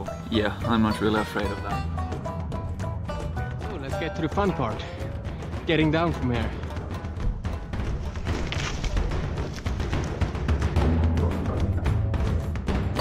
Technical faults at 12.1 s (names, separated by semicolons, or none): none